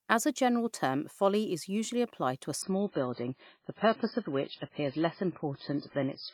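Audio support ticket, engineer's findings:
Adaptive stream at a lower bitrate from 2.62 s to the end: sudden drop to dull, swirly speech with no gap, nothing above 5.3 kHz. Player likely stepped down to a much lower rendition on a slow connection; the smeared artefacts point to roughly 16 kbit/s MP3.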